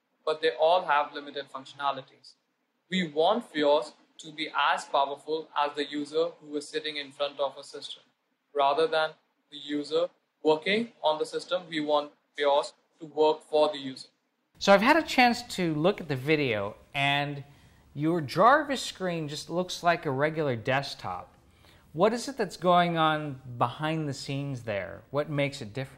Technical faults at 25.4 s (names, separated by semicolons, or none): none